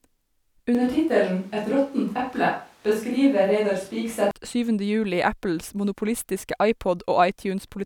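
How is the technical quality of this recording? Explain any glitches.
One clear glitch: from 0.75 to 4.31 s the speech turns roomy, hollow and thinner in the bass, likely a switch to a distant microphone. The level holds steady, with faint room noise underneath.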